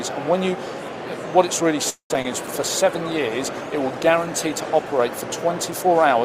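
At 1.89 s the sound stops moving forward and the last moment is stretched into a fading buzz, then about 0.1 s of silence, before it resumes at 2.11 s. This is a call audio freeze, likely caused by packets being held up until the jitter buffer ran dry. About 0.21 s of filler is inserted and nothing is lost, so everything after it arrives later. That distinguishes it from packet loss, where audio actually disappears.

Two short concealed packet losses follow. At 2.14 s about 10 ms never reached the decoder and was patched with only a couple of milliseconds of extrapolation. From 2.22 to 2.25 s about 20 ms went missing and roughly 21 ms of synthesized continuation covers the hole, heard as a brief smear or wobble before the real signal blends back in. Unlike the freeze, the timeline does not stretch. Those fragments are simply gone.

From 2.58 s to the end comes a call bitrate drop. The encoder's rate falls from 96 to 28 kbps and sits at its lowest for about 2.1 s, so the coding becomes coarser and the top end is trimmed. 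The audio turns rough, watery and duller. This is a sustained change in tone that lasts for seconds, not a momentary interruption like the freeze or the concealed losses.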